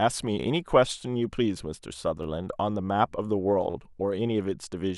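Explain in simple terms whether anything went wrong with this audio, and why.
Yes, something went wrong twice in the speech, both times a repeated buffer. New sound did not reach the player in time, so it played its last tiny chunk again. Each chunk lasts about 11.6 ms, which fits a 512-sample buffer. From 2.23 to 2.25 s, one chunk plays two extra times. From 3.70 to 3.74 s, one plays three extra times. Each repeat makes a short stutter with hard joins. Nothing seems to be missing afterwards.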